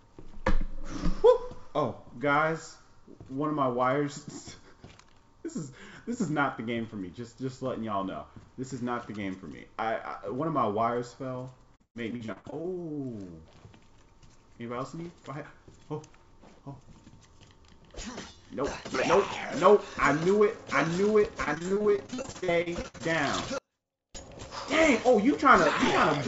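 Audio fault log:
11.76–12.66 s and 21.44–23.05 s: repeated packet loss (robotic sound). The first run has 9 holes, the longest 130 ms, with about 42% of it patched by stretching the last sound. The second has 22 shorter holes, up to 60 ms, with about a third patched. That produces the choppy, robotic stutter through the G.722 call audio, which has nothing above 8 kHz.
23.58–24.15 s: audio dropout to a faint residue. The sound cuts out abruptly for about 0.56 s, leaving only a faint trace about 40 dB below normal. This is likely a break in the signal while the downstream path stayed live.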